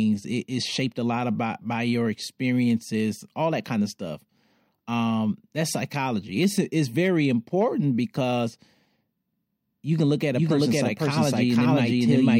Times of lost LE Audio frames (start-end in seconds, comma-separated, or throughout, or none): none